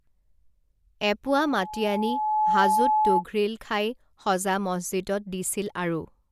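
From 1.25 s to 3.23 s a steady tone near 856 Hz swells over about a second until it sits a few decibels above the speech: loudspeaker feedback squeal. The microphone was picking up its own loudspeaker, and at that frequency the loop gain exceeded one.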